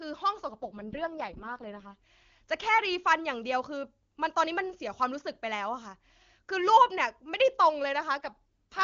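In this speech clip the voice turns rough and synthetic from 0.50 to 2.03 s and again from 8.18 s to the end, with no gap or loss of bandwidth. That points to an AMR rate drop: the wideband codec falls from about 23.85 to 6.6 kbit/s, starving the vocal model of bits.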